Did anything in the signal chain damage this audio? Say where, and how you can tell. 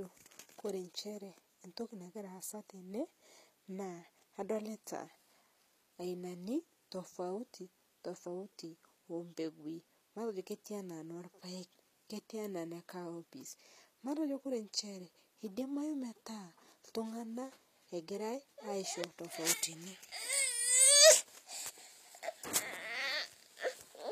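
Yes, at the codec stage. Throughout, s sounds are gritty and lispy under a bright but synthetic treble, likely HE-AAC compression rebuilding the highs from copied lower bands.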